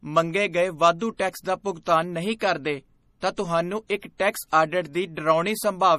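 Across the whole clip the speech has a watery, swirly quality, with s sounds turning metallic and nothing at all above 15.1 kHz. That's likely MP3 compression, with the encoder starved enough (consistent with a low bitrate around 40 kbps) to chop the treble and let weak frequency components flicker in and out.

Then there's pre-echo at four spots: 1.84 to 1.87 s just after "ਟੈਕਸ ਦਾ", 2.39 to 2.41 s, 3.87 to 3.90 s between "ਤਾਂ ਤੁਹਾਨੂੰ" and "ਇੱਕ ਟੈਕਸ", and at 4.51 s right after "ਤਾਂ ਤੁਹਾਨੂੰ ਇੱਕ ਟੈਕਸ". Each time a sharp attack lands late in a codec block, its quantisation noise smears backwards into the quiet just before it, so you hear a brief hiss of about 20 to 30 ms and a softened onset.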